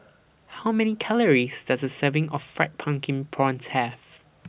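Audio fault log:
No technical faults can be heard anywhere in the speech signal.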